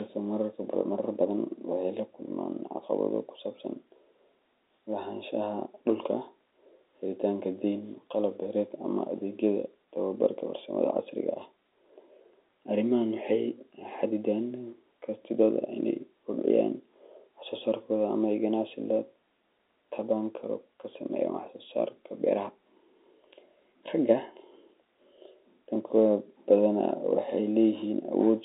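Nothing stood out on listening to this speech clip.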